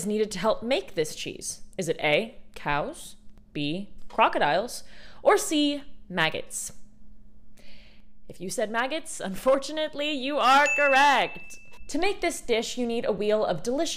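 At about 3.38 s there's a DC step: the waveform's zero line suddenly jumps and then just sits there, offset, right through to the end. The jump is small, about -40 dBFS, but because it happens instantly it comes across as a single low thump or click. It's the sort of thing you get when a converter recalibrates or an input carrying an offset gets switched in. The sound itself carries on unchanged over the top.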